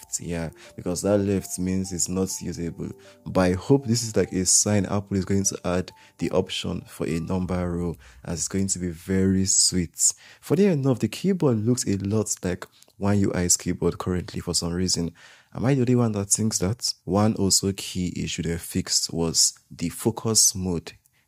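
No technical faults can be heard anywhere in the clip.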